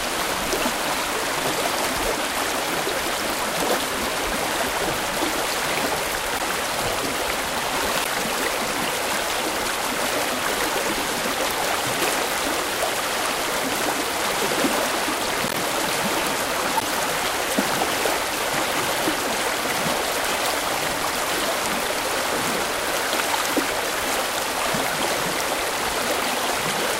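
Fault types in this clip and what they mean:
corrupt frame decoded: Bit errors reached several compressed frames, and the decoder played them anyway. Misread gains or codes put energy at the wrong frequencies for the span of each damaged run. Here the sound is broken by a brief chirp, squeak, blip or burst of noise at 6.36, 8.00, 10.47, 15.48 and 16.77 s. Each lasts roughly 40 to 120 ms. The longest, at 16.77 s, points to a run of several damaged frames in a row.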